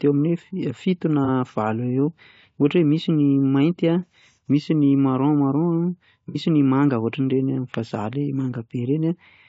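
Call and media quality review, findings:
Rough, grainy speech throughout, with noise filling the gaps between harmonics and a thin, synthetic-sounding top band. Likely low-delay AAC compression (AAC-ELD): short frames resolve pitch harmonics poorly, and the starved bit budget fits a rate around 32 kbps.

Brief smeared, noisy patches at 1.25–1.29 s and 6.29–6.37 s, the second longer. AAC frame loss with concealment: the decoder rebuilt the missing audio from the last good spectrum, consistent with one and then two lost frames.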